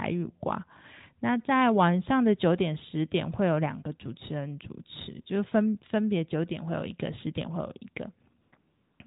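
At 8.42 s the real background drops out for 0.10 s. A smooth, steady hiss takes its place. This is AMR comfort noise. The phone judged the talker silent and stopped sending speech frames. The receiver then made up noise from a rough sketch of the background's level and spectrum. It happens again from 8.58 to 9.00 s, for 0.42 s. The noise switches in and out, and the clip's true room sound vanishes under it.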